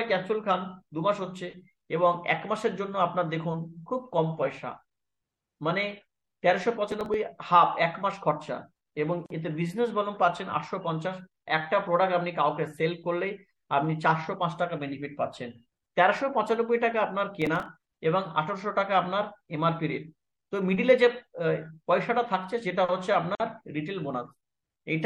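Throughout, the sound is watery and swirly with a dulled top end and smeared attacks, likely MP3 compression at a low bitrate, consistent with around 64 kbps. From 6.92 to 7.14 s, processor overload crackle: a gritty tear as very short buffers, around a millisecond and a half each, are skipped several times in a row. At 9.26 s, a gap at a join of encoded pieces: a 41.5 ms silence with smeared edges, left by encoder delay and padding, before the sound resumes where it stopped. From 17.42 to 17.66 s the same overload crackle returns, slightly longer, with roughly ten buffers dropped. At 23.35 s a second join gap opens, 49 ms long.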